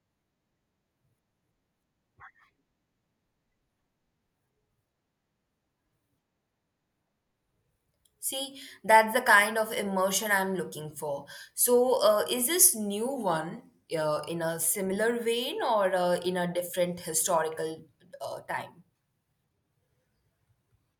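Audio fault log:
13.16–14.28 s and 19.53–21.00 s, drift correction step: Clock-matching software likely slowed playback in a single jump to manage its buffer, running about 6% slow for each stretch. The speech drops by 111 cents, just over a semitone, and drags in tempo, then snaps back to normal pitch and speed at 14.28 s. The second stretch lasts until the clip ends, so it never recovers.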